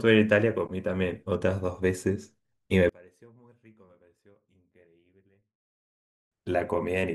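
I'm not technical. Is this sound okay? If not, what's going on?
No. One channel inverted, from 2.89 to 6.32 s: the speech nearly disappears, leaving only a faint trace, then comes back. The likely cause is one stereo side flipped upside down, so when both sides are combined they cancel each other out.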